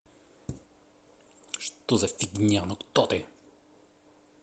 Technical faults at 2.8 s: none

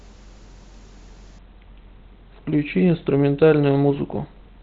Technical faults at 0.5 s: none

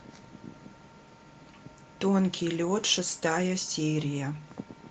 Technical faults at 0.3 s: none

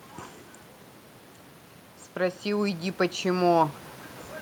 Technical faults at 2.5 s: automatic gain rising

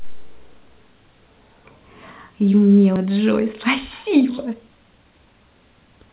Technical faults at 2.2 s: none

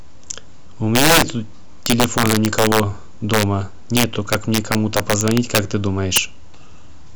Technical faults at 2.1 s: integer overflow

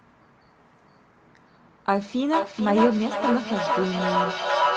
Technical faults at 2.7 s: feedback echo between two devices

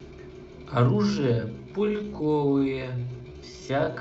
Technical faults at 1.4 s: time-stretched section

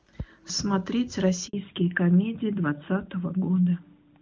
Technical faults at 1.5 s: handover gap; fallback to narrowband

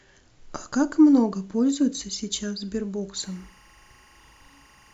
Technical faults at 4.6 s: timecode bleed

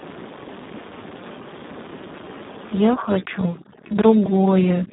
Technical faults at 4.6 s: Speex codec; overdone noise removal

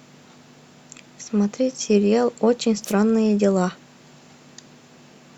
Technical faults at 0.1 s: none

